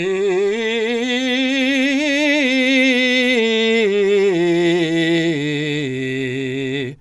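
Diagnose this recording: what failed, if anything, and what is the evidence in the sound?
The failure sits at the codec stage: the music has been squeezed through a low-bitrate coder, most likely Dolby Digital compression, and the damage is plainly audible for the whole clip. Nothing is present above about 11.5 kHz, so the top end sounds dull. Sustained tones carry a rough, fluttering haze, which fits the encoder starving many frequency lines of bits and the decoder filling them with noise, consistent with a rate around 64 kbps.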